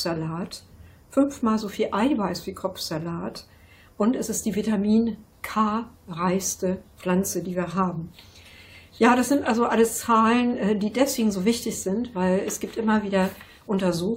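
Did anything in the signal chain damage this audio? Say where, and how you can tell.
No, the signal chain shows no damage anywhere.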